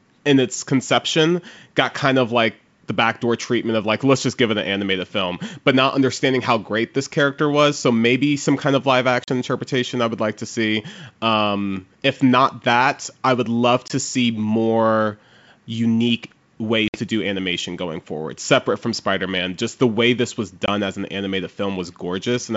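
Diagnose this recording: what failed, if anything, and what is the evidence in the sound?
The failure is at the network stage: packet loss on an ADPCM call. Four hard-edged silent holes fall at 9.24, 13.88 (after "that I would love"), 16.88 (before "do animation going forward") and 20.66 s (after "the way this was"), lasting 40, 20, 60 and 20 ms, roughly one to three packets each. On a waveform they show as flat gaps with abrupt edges. A spectrogram shows full-band blank columns, then briefly distorted speech as the decoder's predictor and step size resynchronise.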